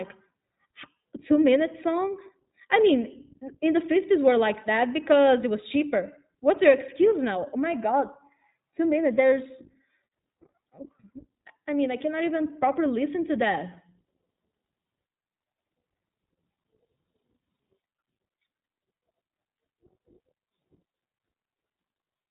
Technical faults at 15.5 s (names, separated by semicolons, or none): iLBC codec